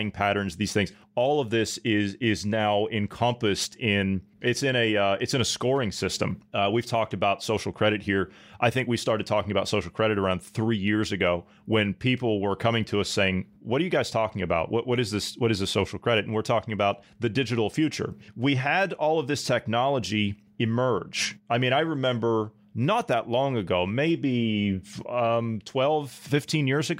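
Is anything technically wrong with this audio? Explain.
No, nothing technically wrong can be heard in this speech recording. There is no technical problem here to explain.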